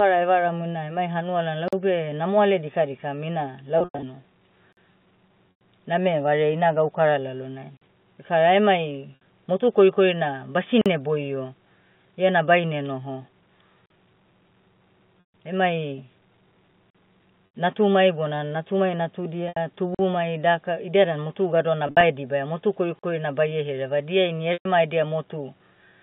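A gap between chunks opens at 1.68, 4.73, 7.77, 10.81, 13.86, 16.90, 19.95 and 22.99 s. Each is a 44 ms hole, about 3.04 s apart, where the audio is paused at a join and nothing is lost. The strict regularity and the clean silence set these apart from the packet losses.

Packet loss with pitch repetition falls at 3.78–4.03 s, just after "namoale dikadikam ina" (160 ms lost, in runs up to 100 ms); 5.51–5.61 s, just before "name vareai ina gaukara"; 9.16–9.20 s; 15.20 s; 17.46–17.54 s; 19.48–19.57 s, after "natumai bona natumai"; 21.87–22.03 s; and 24.53–24.65 s. Each covers 60–160 ms. Instead of silence, the last pitch cycle is looped, so the sound briefly holds as a buzzy tone and then fades. These events come at irregular times.

The telephone band, roughly 150 Hz to 3.6 kHz, comes from the G.711 A-law coding.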